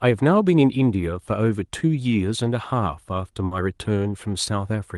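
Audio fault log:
3.45–3.53 s, burst of packet loss: about 60 ms of speech was lost, so the receiver extended and faded the last sound for roughly 60 ms, then resumed further on. Unlike a plain dropout, the gap holds a decaying buzz or hiss rather than silence.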